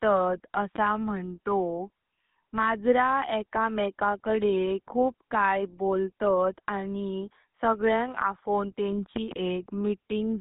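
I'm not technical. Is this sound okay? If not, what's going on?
No. Two things are wrong with it.

The whole clip has been through the GSM full-rate codec, the compression used by early mobile phones. It rebuilds the speech from a simplified model of the voice and carries nothing above about 3.8 kHz, so everything sounds narrow, muffled and phone-like, with a buzzy, gravelly roughness laid over it. This damage is plainly audible from start to finish, not just in a few spots.

There are also two loud pops on top of the speech, which carries on underneath them. The first is a single sharp pop at 0.76 s, clearly louder than the voice. The second, from 9.16 to 9.35 s, right after "बोलतात आणि सगळ्यांग आफों", is a pair of pops in quick succession and is even louder. These are likely from an electrical jolt such as a plug, a switch or static.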